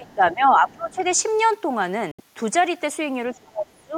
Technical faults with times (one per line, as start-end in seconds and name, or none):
0.00-1.04 speech suppressed in double talk
0.08-0.15 other side's voice leaking through
0.70-1.11 other side's voice leaking through
2.11-2.20 Bluetooth dropout
3.34-3.97 speech suppressed in double talk